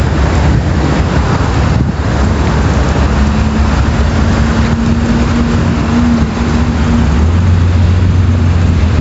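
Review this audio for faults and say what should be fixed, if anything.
Gain pumping runs through the whole clip. The gain is pulled down whenever a loud sound arrives, shifting by about 5 dB. The likely cause is microphone gain set far too high, so a fast limiter or compressor keeps clamping down on every peak and releasing in between. This squeezes loud and soft parts toward the same level and makes the audio sound squashed. The 8 kHz upper limit comes from the call path. To prevent the pumping, lower the input gain so peaks stay below the limiter's threshold.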